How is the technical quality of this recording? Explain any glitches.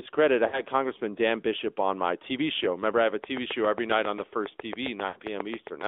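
The recording has clear technical problems: plainly audible mobile-codec coloration throughout, two brief dropouts, and a regular click train over the last few seconds.

AMR narrowband mobile codec, throughout the clip: the speech went through a 2G/3G-style mobile speech codec that models the vocal tract and rebuilds the voice from a few pulses. The band runs only from 300 Hz to 3.6 kHz, and the synthetic, buzzy coloration, which fits a bitrate around 10 kbps, is plainly audible.

Lost AMR speech frames, at 0.48–0.62 s and at 5.08–5.19 s: corrupted frames were dropped, and the decoder stretched the last good pitch and vocal tract settings while fading the gain. The first event sounds like about 40 ms of lost audio, consistent with two frames. The second is about 80 ms, pointing to four frames, and the voice is briefly drawn out and fades before returning.

Train of clicks, from 3.24 s to 5.82 s: a steady ticking of around twenty similar pulses comes at a regular 7.4 per second, each about 15 dB above the speech. 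It is heard over the sound and in pauses. Its likely cause is interference from nearby equipment or a faulty connection or power supply.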